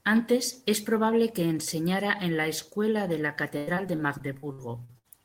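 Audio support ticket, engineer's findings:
Repeated packet loss (robotic sound), 3.57 to 5.06 s. Choppy speech with pieces missing. Network jitter buffer / loss concealment. Around ten dropouts, longest about 97 ms. Each is patched by stretching the previous sound, so roughly a quarter of this span is synthetic fill.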